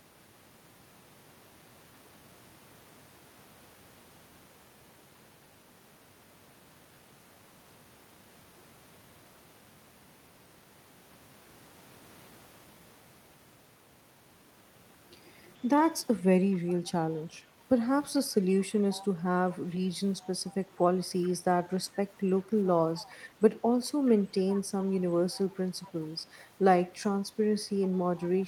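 From 16.52 s on, a faint copy of the speech trails the original by 429 ms, roughly 20 to 30 dB quieter, in scraps at 16.52–17.45, 18.91–19.05, 20.21–20.28, 21.24–21.70, 22.98–23.13, 24.06–24.84, 25.37–25.91 and 28.38–28.45 s. This is echo leak, likely from a far-end loudspeaker whose echo canceller passed part of its microphone pickup back. A spectrogram shows the harmonic bands repeated, weaker, 429 ms later; the waveform shows small ghost bursts after phrases.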